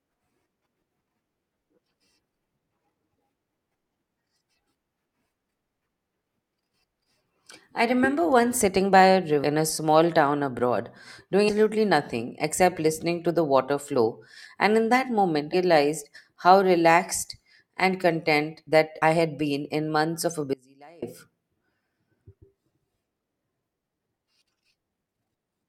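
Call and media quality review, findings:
Compressed frames skipped at 9.43, 11.48, 15.53 and 19.01 s. Speech jumps ahead. Roughly 300 ms lost each time, about 200 ms at 19.01 s. Fits 21.3 ms codec frames dropped by the decoder.

Audio dropout to a faint residue, 20.53 to 21.02 s, 490 ms. Abrupt cut, with only a faint leak about 30 dB down. Likely an upstream signal loss while the later path stayed live.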